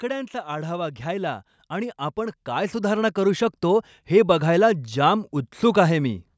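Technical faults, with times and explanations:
0.44 to 5.37 s, automatic gain rising: The automatic gain control judged the input too quiet and kept raising its gain across nearly five seconds, a total lift of about 13 dB. Because the gain is applied to the whole signal, the speech and the background noise swell together, so the level climbs slowly rather than jumping. The call microphone processing is also present, with its high-pass filter trimming the lowest bass and nothing above 8 kHz.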